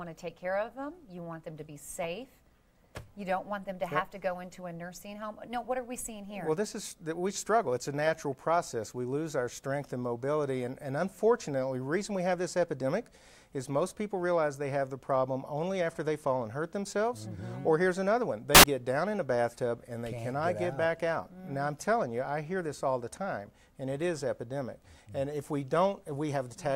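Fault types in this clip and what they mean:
Samples built from the wrong bytes: the reader misassembled each sample's bytes, shifted by a byte or in swapped order, so the rapidly changing low bits became the dominant part of every value. The result is a burst of loud, harsh broadband noise from 18.55 to 18.64 s.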